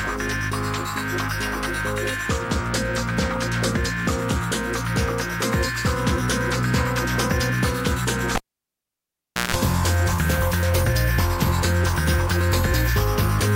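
At 8.35 s a cable is pulled and plugged in. A pop drops the sound to near silence for 1.15 s. A 165 ms burst of 60 Hz mains buzz follows, then a pop at 9.55 s.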